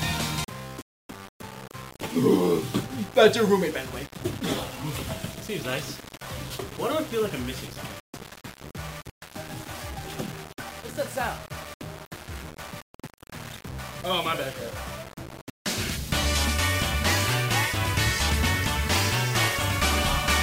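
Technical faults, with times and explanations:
Throughout, low bit depth without dither: the whole clip carries a grainy, gritty distortion that moves with the sound itself, roughening quieter passages most and making the softest moments sputter or fall away to silence. This likely comes from the audio being reduced to about 6 bits with plain rounding and no dither, so each sample snaps to a coarse step and the error tracks the signal, sitting only about 15 dB below it.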